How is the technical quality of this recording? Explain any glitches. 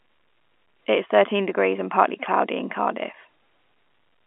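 No glitches can be heard; the speech comes over an ordinary telephone path, its G.711 telephone coding keeping the sound within a line band of roughly 250 Hz to 3.4 kHz, as is normal for such a call.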